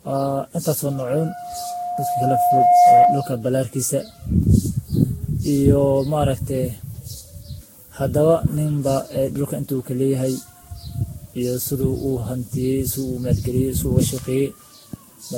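Across the whole speech clip runs generation loss. The swirly, hollow smearing and blurred consonant attacks are worse than a single encode at around 60 kbit/s would cause, with nothing above 16.6 kHz. That points to likely repeated re-encoding, perhaps ten passes through a Vorbis-type codec, each adding fresh quantisation damage.

From 0.85 to 3.44 s a loudspeaker feedback squeal appears: one steady 710 Hz tone swelling over about two seconds to roughly 10 dB above the speech. The microphone–speaker loop ran away at that frequency. Its steady self-building growth sets it apart from a one-off tone burst.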